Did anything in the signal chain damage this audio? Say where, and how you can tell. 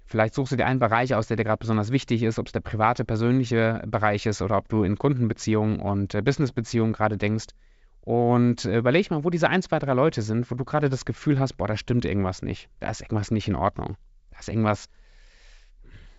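No, nothing in the chain damaged this speech.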